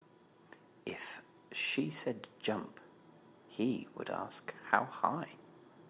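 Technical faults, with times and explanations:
Nothing to flag here, just speech carried over a call line whose sound stops at 4 kHz, which fits an ordinary G.711 telephone codec.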